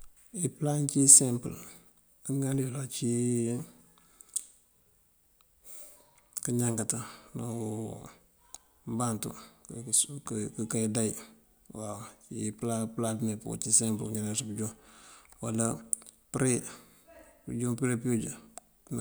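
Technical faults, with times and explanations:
No technical faults can be heard anywhere in the clip.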